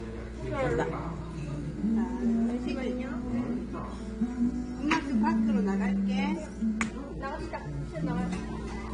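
Throughout, nothing rises above 10 kHz. Artefacts from two different codecs are heard together, two types unlike a single encode, so the likely cause is transcoding between lossy codecs.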